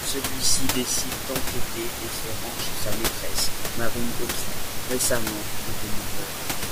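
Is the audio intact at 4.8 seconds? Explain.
Yes, the audio is intact at 4.8 seconds; the only background is the room noise picked up with the speech, sitting about 10 dB below it.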